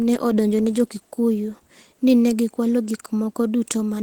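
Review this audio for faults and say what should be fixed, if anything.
Throughout the speech, a muffled, hoarse, grainy texture points to Opus compression, likely running in its hybrid speech mode at a rate that fits about 16 kbps. The content still reaches about 20.1 kHz, but the damage is plainly audible. Encode at a higher Opus bitrate, or keep an uncompressed master, so the encoder never falls back to this starved mode.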